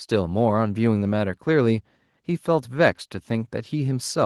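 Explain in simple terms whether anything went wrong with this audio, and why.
Nothing went wrong with this audio, because there is no fault anywhere in the recording.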